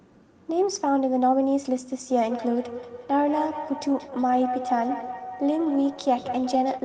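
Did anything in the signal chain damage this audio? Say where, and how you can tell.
Yes. It's a call-processing problem: feedback echo between two devices. From 2.06 s to the end, the speech comes back again at a steady spacing of roughly a fifth of a second, peaking about 9 dB below the direct sound, and the repeats sound thinner and more ringing than the original. One device is replaying the other's microphone feed in the same room, and that mic picks it back up. Each echo canceller only subtracts its own playback, so the loop survives.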